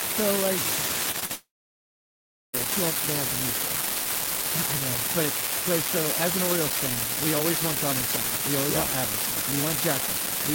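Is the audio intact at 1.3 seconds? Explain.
No. At 1.3 seconds the sound is caught in a short concealed packet loss running from 1.25 to 1.31 s, about 40 ms of audio that never reached the decoder in time. The receiver bridged the gap by extending the preceding sound and then blended back, so it is heard as a brief smear or wobble. A shorter loss of the same kind sits just before, at 1.20 to 1.23 s.

Immediately after, from 1.33 to 2.55 s, the speech cuts out for about 1.2 s. The gap sounds like a short fading buzz or hiss that gives way to roughly a second of silence, and the audio returns without the missing part. This is likely a long network dropout. On the waveform the fill tapers to near-silence. The spectrogram shows energy fading and then a quiet band.

Throughout, including at 1.3 s, an unreliable data bit adds a steady crackle that persists even in pauses. Each flipped bit produces a spike of identical height, seen as thin vertical streaks across the spectrogram.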